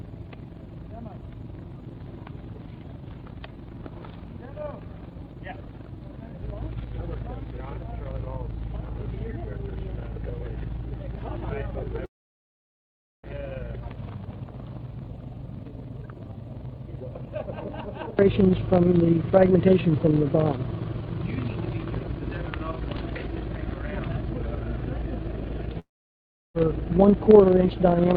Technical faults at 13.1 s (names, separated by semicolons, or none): long network dropout